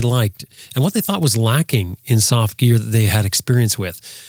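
Listening closely to the speech, nothing stood out as a technical problem at any point.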